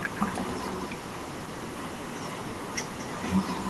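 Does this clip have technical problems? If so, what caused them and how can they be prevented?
Yes. The far-end microphone recaptured its loudspeaker with no canceller, so echo with no canceller trails the speech throughout, roughly 0.2 s later and about 12 dB quieter. Enabling acoustic echo cancellation at the far end, or having that side use headphones, would prevent it.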